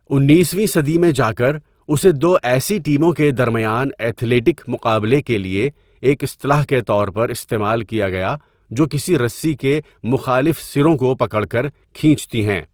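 Throughout, Opus compression likely coded the speech in its music mode at a rate fitting 24 kbps, noise-filling bands so tones sound plainly grainy and rough.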